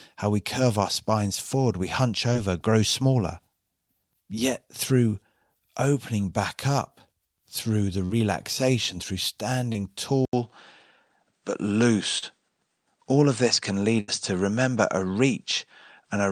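At 2.33 s, between "spines forward we hunch" and "grow smaller", a short concealed packet loss occurs: about 20 ms of audio never arrived in time, and the decoder filled it by extending the preceding sound before blending back, leaving a brief smear. The same happens at 8.05 s after "back up through the", where a 40 ms gap is patched, a few milliseconds are dropped, and there is a brief wobble. It happens again with a tiny 20 ms hole at 9.73 s.

At 10.25 s there is an 80 ms silence, likely from the input switching to a poorer device. From there to the end, nothing is present above 9 kHz, so the sound turns duller, and a new noise floor appears about 55 dB below the signal. The level stays about the same, so the change is heard as a shift in tone rather than in loudness.

A further short concealed loss at 12.18 s covers a 40 ms gap with extrapolated sound, giving a brief smear.

At 14.00 s a burst of packet loss removes about 80 ms in one go. 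The receiver stretches the last sound across the hole and fades it, producing a held, dying buzz or hiss, and the audio then picks up further on, with that stretch of sound simply missing.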